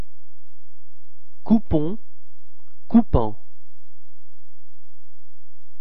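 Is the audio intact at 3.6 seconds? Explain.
Yes, the audio is intact at 3.6 seconds, with no dropout, click, distortion or other fault audible at that point.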